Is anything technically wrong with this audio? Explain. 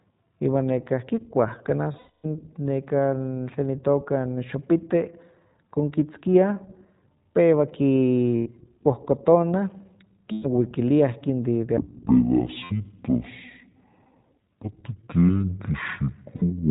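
Yes, there are three separate problems.

The whole clip runs through the iLBC codec, and the damage is plainly audible. The sound fits iLBC's 15.2 kbps mode with 20 ms frames. The codec throws away everything above 4 kHz, so the speech is muffled and narrowband. Each frame's excitation is coded on its own, which gives the voice a slightly rough, synthetic edge throughout. That's just what this codec sounds like at this setting.

There are also lost iLBC frames at five points: 1.92 to 2.26 s, 8.36 to 8.49 s, 10.32 to 10.46 s, 12.64 to 12.72 s, and 16.36 to 16.50 s, just before "pero neli". The first is the worst, with about 280 ms missing and the longest run around 300 ms. The others are between 60 and 120 ms. In each gap the decoder repeats the last pitch cycle mixed with noise, so you hear a held, buzzy vowel that fades during the long first gap. Because iLBC frames stand alone, the voice snaps back straight afterwards.

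From 11.77 s to the end, the section is at the wrong speed. It plays at 0.51 times normal speed, so everything comes out slow and about ten semitones lower, deep and dragging. Speed and pitch drop together the instant it starts, which points to the likely cause: a player or editor using the wrong clock for that stretch, roughly halving the playback rate.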